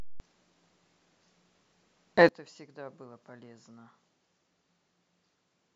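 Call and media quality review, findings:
Sudden gain jump at 2.29 s, held to end of clip. Digital gain likely switched without a ramp, a setting or bit shift applied between adjacent samples. Speech and background noise drop together by about 24 dB in one step, possibly with a click.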